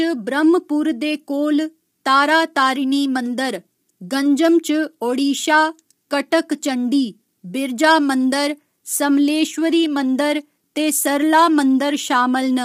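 Throughout the speech, a rough, grainy texture with noise filling between harmonics points to low-delay AAC compression, likely AAC-ELD near 32 kbps, whose short frames blur pitch structure rather than smearing transients.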